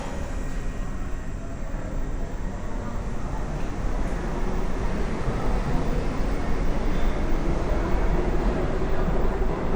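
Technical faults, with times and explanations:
Throughout: resampler restarted on every block. A buzz at 50 Hz rides under the sound and drops out whenever the signal stops. Each 20 ms block was converted in isolation, likely from 48 kHz to 44.1 kHz, so every block edge carries a small interpolation error.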